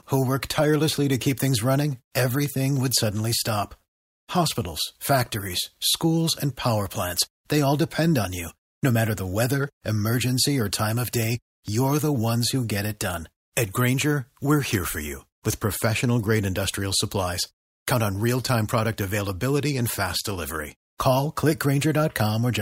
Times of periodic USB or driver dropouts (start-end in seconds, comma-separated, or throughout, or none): 0.41-15.77